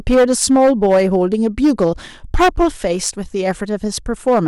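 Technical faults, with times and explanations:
Throughout: hard clipping. The speech is driven about 10 dB beyond what the stage can pass, so around one sample in twenty is sliced flat. Those squared-off peaks add high harmonics, a gritty fuzz on every loud moment, unlike soft saturation's rounder, warmer thickening.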